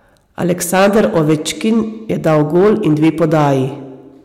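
Hard clipping runs through the whole speech clip: a stage is overdriven by about 10 dB, flattening peaks on around one in twenty samples and leaving a harsh fuzz.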